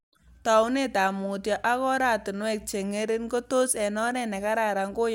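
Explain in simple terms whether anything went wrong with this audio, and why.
Nothing went wrong here, as far as I can hear: the speech comes across steadily, with no dropouts, glitches or other trouble at any point.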